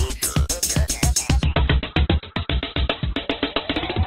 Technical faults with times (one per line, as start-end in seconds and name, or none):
1.43-4.07 adaptive stream at a lower bitrate